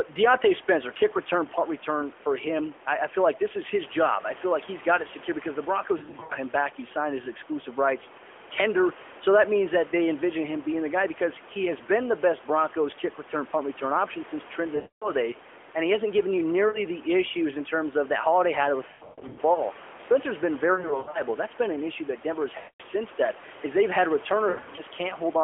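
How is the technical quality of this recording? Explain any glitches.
The recording is narrowband mobile-phone speech with repeated dropouts from lost AMR speech frames. Room noise sits about 20 dB below the speech, and the line band runs roughly 300 Hz to 3.4 kHz.

Lost AMR speech frames occur at 5.98 to 6.33 s (just before "him back"), 14.76 to 15.11 s (after "punt return option since"), 16.68 to 16.80 s, 18.88 to 19.61 s, 20.74 to 21.22 s, 22.58 to 22.82 s, and 24.50 to 24.82 s (after "that is they've had"). Corrupted frames were discarded. The decoder then repeated the last good pitch and vocal tract settings at falling gain. Short scattered losses warble briefly. The longer runs, up to 260 ms, smear the sound and fade it toward silence before it returns weak.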